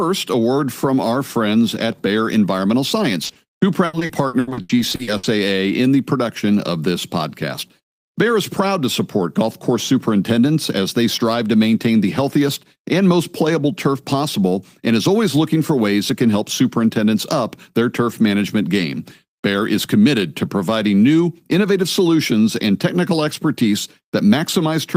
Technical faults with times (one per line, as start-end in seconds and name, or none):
3.25-3.37 short concealed packet loss
3.85-5.25 repeated packet loss (robotic sound)